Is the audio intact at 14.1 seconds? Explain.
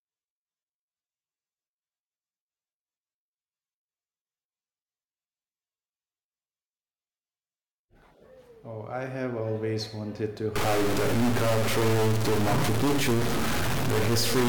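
No. A stuck bit runs from 10.56 s, just after "have always wanted to", to the end. Harsh buzzy distortion results, likely from one bit offsetting values by about -20 dBFS.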